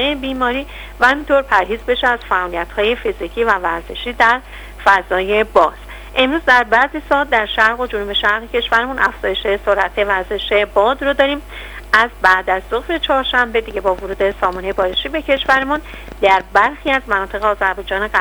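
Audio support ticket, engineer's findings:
Likely external interference or an unstable interface injecting repeated pulses into the signal path. Train of clicks, 13.71 to 16.89 s: around thirty similar clicks, about 7.9 per second, irregularly spaced, peaking roughly at programme level; audible ticking over the sound and in gaps.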